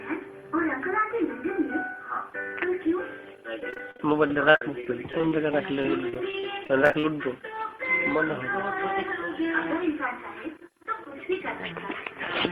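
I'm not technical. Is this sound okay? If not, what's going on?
No. From about 3.6 to 7.0 s there's repeated packet loss (robotic sound): dozens of tiny holes, each under 50 ms, filled by stretching the sound just before. Unlike one clean dropout, these holes come in quick succession, giving choppy stutter with pieces missing.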